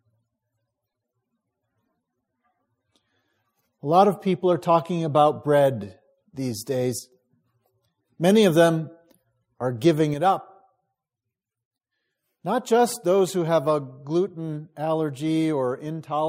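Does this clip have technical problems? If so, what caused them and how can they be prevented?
Yes: the level falls abruptly by about 6 dB from 6.99 to 7.12 s and again from 10.14 s to the end, likely one channel dropping out before the mono sum. Check stereo cables and connectors to prevent it.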